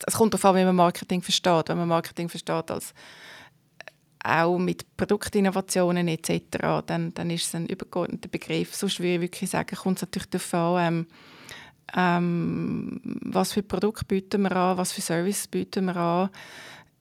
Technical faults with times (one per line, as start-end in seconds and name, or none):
none